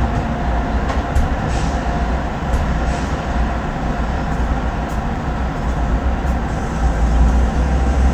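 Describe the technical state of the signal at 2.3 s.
At 2.3 s the sound carries a doubled audio track, present across the whole clip: a second, full-band copy trails the original by about one and a half seconds, roughly 5 dB quieter, with no decay or room colour. This is likely a second capture through a slower path mixed back in.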